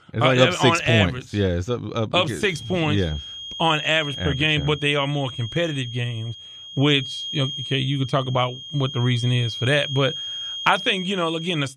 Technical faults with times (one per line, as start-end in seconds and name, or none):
2.35-11.76 feedback whistle